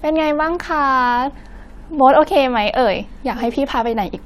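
No technical faults are audible.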